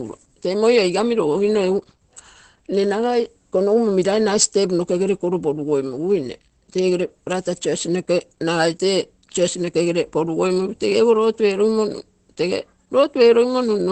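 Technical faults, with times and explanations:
Throughout, Opus compression. The speech sounds muffled and hoarse. Nothing is heard above about 8.5 kHz, so the top of the spectrum is simply gone. This damage is likely from a low-rate encoder switching to its speech mode, which narrows the bandwidth and trades detail for raw intelligibility. The heavy damage fits a rate near 12 kbps.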